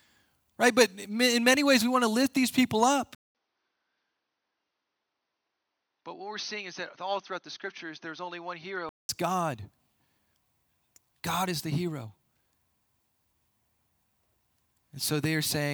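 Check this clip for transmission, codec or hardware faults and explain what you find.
One fault is present: the input likely switched to a poorer device from 3.15 s to 9.09 s. Right after "lift these people up" there is a gap of about 0.2 s. The speech then returns duller and slightly quieter, down by about 5 dB, with nothing above 6.3 kHz and a faint new noise floor roughly 50 dB below it. This fits the capture path moving to a lower-bandwidth microphone or headset profile with its own noise, then switching back at 9.09 s.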